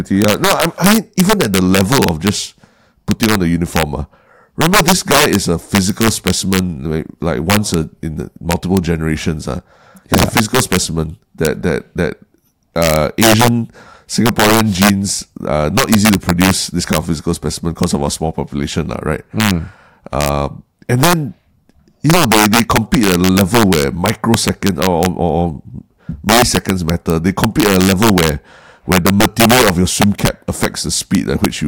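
Throughout the speech, integer overflow: with the gain pushed about 7 dB too high, the loudest peaks, roughly one sample in a hundred, exceed the integer ceiling and wrap to the opposite sign, producing violent cracks far sharper than clipping's flattened, buzzy distortion.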